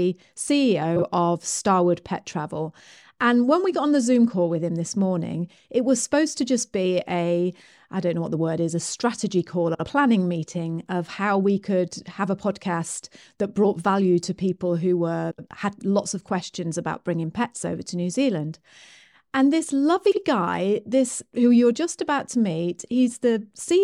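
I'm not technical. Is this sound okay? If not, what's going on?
No, there are four short glitches where bits of the speech play in the wrong order, a fault called frames out of order. The audio is sent in tiny chunks, and at these spots two neighbouring runs of chunks got swapped, so a fraction of a second plays with its two halves swapped and sounds like a garbled flutter. It happens around 0.96 to 1.02 s, 9.74 to 9.85 s (just after "is a strategy call"), 15.31 to 15.47 s (after "value to people who"), and 20.06 to 20.18 s, right before "guy this who you're". Nothing is actually missing.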